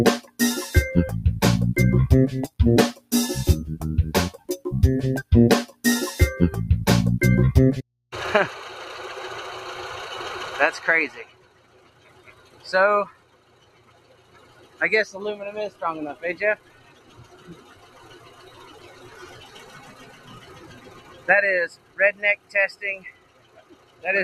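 A noise suppressor built for speech was left running on material it wasn't designed for, so it treats sustained tones, ambience and decaying tails as noise to be removed. Across the whole clip its gain swings by around 20 dB as it shifts between passing and attenuating, and the audio pumps and thins: onsets punch through, then the body of each sound sinks back.

The clearest cases are where the sound is cut by the noise suppressor, each pulling the level down by about 13 to 14 dB. Short dips come at 0.21–0.40 s, 2.49–3.12 s, 4.34–4.50 s and 5.23–5.85 s, each a fraction of a second where held material drops away. Longer stretches follow at 11.25–14.81 s and 15.7–24.04 s. There the suppressor clamps down for several seconds at a time, so steady content stays sunken and its decays are cut short while only sharper attacks get through.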